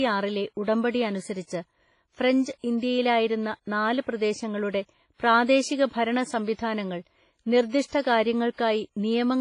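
Throughout the speech, a transform encoder working at a low bitrate, likely WMA compression, is zeroing weak spectral lines and spreading quantisation noise across long blocks. The sound is heavily damaged. Nothing survives above 10.5 kHz, so sibilants lose their top. A ringing, washy quality hangs on every syllable, and a hiss swells and fades with the level of the voice, which fits a rate around 24 kbps.

At 6.54 to 6.59 s and again at 8.53 to 8.58 s, a sharp onset falls late in a coding block. The noise budget sized for that loud attack is then smeared back over the quiet gap before it. This pre-echo spreads about 53 ms and 57 ms respectively. Each attack is heralded by a brief rush of hiss and arrives softened, its edge blurred rather than crisp.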